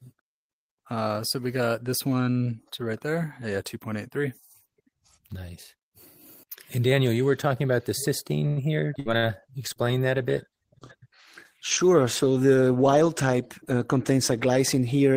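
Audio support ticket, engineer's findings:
Held, slightly buzzy sound, 8.47–8.60 s. Short stall from a late packet: jitter buffer ran dry and the receiver stretched the last sound for 96 ms until the packet arrived. Playback resumed at the same point, nothing lost.

Abrupt forward jump, 8.93–8.97 s, near-seamless join. Skip ahead: around 70 ms of audio dropped while later audio was already queued. The two sides of the cut are spliced almost directly.

Brief fading buzz/hiss dropouts, 9.00–9.08 s and 9.17–9.25 s. Burst of packet loss, twice: consecutive packets lost or too late. Concealment extended and attenuated the last sound for about 55 ms and 52 ms respectively, then resumed with 60 ms missing.

Rougher, watery, duller sound, 9.12–14.72 s. Call bitrate drop: bandwidth estimate fell and the Opus encoder went from 32 to 17 kbps for the whole stretch. Coarser coding and reduced top end until the rate recovered.

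Drawn-out, slightly slow audio at unchanged pitch, 9.27–10.03 s. Jitter buffer slow-down: receiver repeated pitch periods and pause fragments, adding 67 ms and playing at 92% speed to rebuild its reserve.

Hurried-sounding audio at unchanged pitch, 12.94–14.47 s. Jitter buffer speed-up: buffer held excess audio, so the receiver trimmed short pitch-period pieces, roughly 100 ms in total, playing at 106% speed to cut latency.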